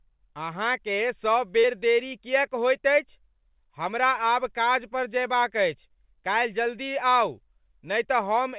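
At 1.6 to 1.66 s, just before "देरी किएक होइत अछि", there is a short concealed packet loss: about 40 ms of the call arrived too late for the decoder, and the receiver covered roughly 35 ms of it by extending the preceding sound before easing back into the real signal. It comes across as a brief smear rather than a hard gap or click. A plain dropout would leave silence, and this does not. The narrow call band, with nothing above 4 kHz, fits G.711 mu-law.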